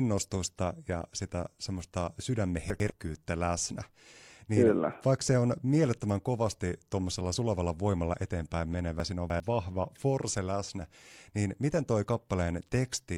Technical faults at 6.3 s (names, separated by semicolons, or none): none